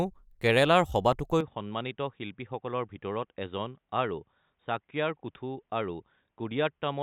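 At 1.41 s the speech abruptly turns dull and boxy and stays that way to the end, most likely because the input switched to a poorer device. There is no gap at the change. On a spectrogram everything above 3.8 kHz vanishes; the waveform drops a few decibels, over a faint new noise floor.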